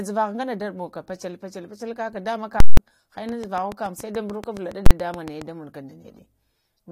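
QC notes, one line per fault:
2.60–2.77 s, invalid numbers at full scale: a calculation blew up into infinite or invalid values, so the output got pinned at one extreme for about 0.17 s, which fits an 8192-sample block. You hear a very loud pop going in and another coming out, with nothing in between.
3.29–5.43 s, train of clicks: regular ticking at about 7.1 per second, roughly fifteen clicks in all, each sitting about 15 dB above the speech and carrying on through the pauses. The clicks all have much the same shape, likely interference from nearby gear or a flaky connection or supply.
4.86 to 4.91 s, invalid numbers at full scale: same blow-up again, inside the click run, but this time only 43 ms long, which fits a 2048-sample block. The pinned stretch is so short the two edges merge into one loud bang.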